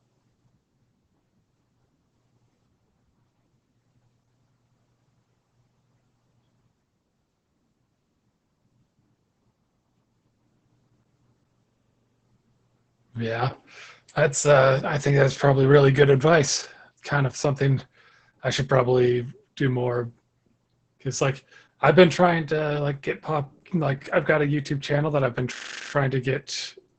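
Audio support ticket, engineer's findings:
Speech muffled, hoarse, slightly robotic throughout; nothing above 8.9 kHz. Opus voice compression, SILK wideband mode, coarse excitation coding; damage level points to roughly 10 kbps.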